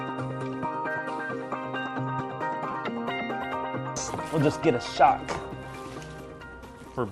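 At 2.71 to 2.73 s there is a gap from lost LE Audio frames. About 20 ms of audio goes missing, which fits two lost frames. The LC3 decoder fills it by repeating the last spectrum with random signs. It sounds like a brief noisy smear.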